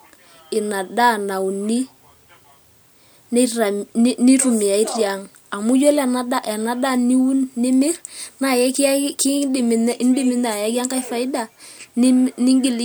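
No audible technical faults turn up anywhere in this speech recording.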